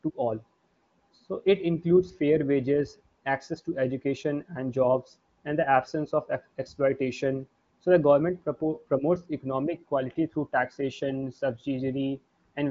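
No technical faults are audible.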